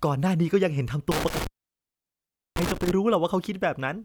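Intermittent contact runs from 1.11 to 2.91 s in this speech clip: a loose cable or plug breaks the connection, so the sound drops out with crackle at each edge. The line stays open for about 1.1 s in total, leaving faint hiss where signal should be.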